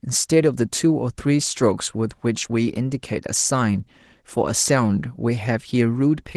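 Nothing goes wrong anywhere in this speech, and the Opus voice compression it passed through keeps the full band with only light coding damage.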